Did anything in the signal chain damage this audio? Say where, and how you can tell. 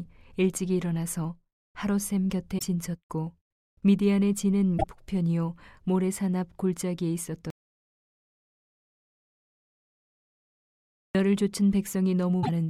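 Yes. At the codec stage, three short bursts at 2.58–2.63 s, 4.77–4.84 s and 12.42–12.49 s are likely a broken MP3 bit reservoir. Frames appear to have been cut from the stream, so the frame after each cut reaches back into the reservoir for its data and decodes bytes from the wrong frame. You hear the sound jump forward, with a brief garbled chirp or noise burst of roughly two to three frames. That length fits 26 ms MP3 frames.

At the capture or input stage, there is an audio dropout to silence from 7.50 s to 11.15 s, lasting about 3.6 s. The likely cause is a loss of input, such as a disconnected device, a failed link or a mute, while the recorder kept writing silence. The speech cuts off mid-flow and returns abruptly, and the gap is digital silence with no room tone at all. This is how you can tell the input disappeared rather than the speaker pausing. Whatever was said during those seconds is gone.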